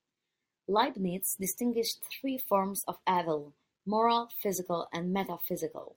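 No technical faults are audible.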